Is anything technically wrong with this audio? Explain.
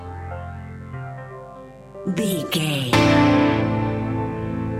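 Yes, there is mains buzz running through the whole clip. Sharp switching spikes from something like a dimmer or rectifier enter the signal twice per 50 Hz cycle, spraying harmonics up to several kHz. That makes it a steady, raspy buzz about 25 dB below the sound, not the smooth, low, pure tone of plain hum.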